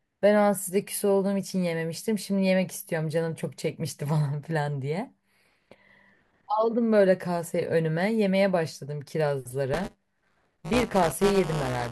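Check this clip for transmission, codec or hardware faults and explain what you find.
One hardware fault is present, near the end of the speech. Buffer tearing runs from 9.73 s to 11.91 s. The write and read positions in the playback ring buffer have slipped, so about a tenth of each period replays audio roughly 10 ms stale. The hard joins produce a robotic 188 Hz buzz, which fits a 256-sample buffer, and it is heard only under the speech.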